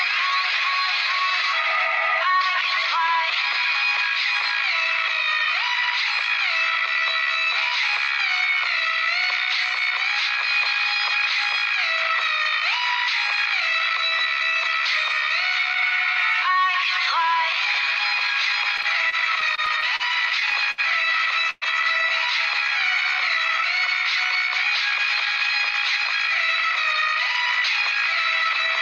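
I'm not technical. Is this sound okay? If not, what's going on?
No, there are three related hiccups close together in the second half.

From 18.77 to 20.02 s the sound keeps catching and dragging, with eight tiny hold-ups, the longest about 38 ms. That is repeated stalls (stutter): the data carrying the audio kept turning up late, so the player's small waiting store ran dry again and again. Each time it stretched the last bit of sound to cover the wait, about 144 ms in all. Nothing is lost, but the sound limps along.

At 20.71 s one moment is held too long, about 65 ms, before the sound carries on. This is a short stall from a late packet: a single piece of the audio arrived after it was needed, so the player drew out the last sound until it came, then resumed from the same point. Again, nothing goes missing. There is just a small unnatural hold.

From 21.50 to 21.64 s the sound briefly freezes into a fading buzz or hiss, then about 20 ms of silence, before picking up again. 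This is a call audio freeze, likely caused by the audio data being held up on its way, leaving the player nothing to play for about 117 ms. It filled the wait itself, so a short gap was inserted rather than anything being cut out.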